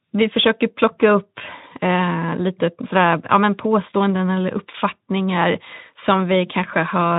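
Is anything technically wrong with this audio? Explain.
No, nothing is technically wrong with this audio.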